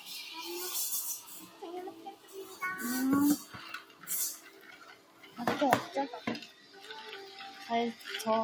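Across the whole recording a noise suppressor applied to music or sounds is at work. A processor tuned for speech treats steady, sustained material as background and keeps pulling it down, so level swings of around 15 dB come and go as the gain reacts. The result pumps and thins. On a waveform the envelope breathes unnaturally, and a spectrogram shows held energy fading in uneven patches while onsets stay bright.

Five passages show sound cut by the noise suppressor, where sustained or decaying parts sank further than their surroundings: 1.21 to 1.62 s (about 9 dB), 1.95 to 2.56 s (about 10 dB), 3.81 to 4.04 s (about 9 dB), 4.38 to 5.38 s (about 9 dB, roughly a full second) and 6.47 to 6.82 s (about 7 dB). Each dips and hollows out. These appear as sagging envelope stretches and darkened patches on the spectrogram.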